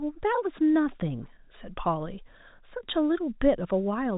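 Nothing in this speech recording stands out as a technical fault. It carries the narrow band of G.711 telephone coding, with nothing audible above about 3.8 kHz and only faint traces of the coding itself.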